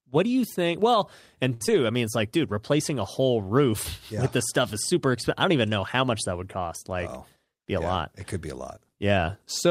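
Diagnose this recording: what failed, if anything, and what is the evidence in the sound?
The fault sits at the network stage, in the jitter buffer. A short stall from a late packet runs from 1.53 to 1.74 s. The buffer ran empty while waiting. The receiver stretched the last sound by 69 ms, then resumed. Nothing is missing, but playback runs 69 ms later.

Inside that stall, at 1.66 to 1.70 s, there is a short concealed packet loss. About 20 ms of speech never reached the decoder. The receiver filled 12 ms by continuing the preceding sound, then blended back. The result is a brief smear.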